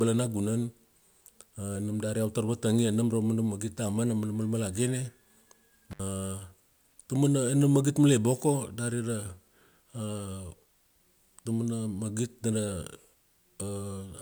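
This speech clip has one intermittent contact fault, from 5.91 to 6.00 s. The sound drops out abruptly for about 64 ms. Crackle marks both edges of the gap. Faint hiss remains while the signal is gone. This points to a loose cable or plug somewhere in the chain. The connection briefly opened and then closed again. The crackle comes from the contact scraping as it breaks and remakes.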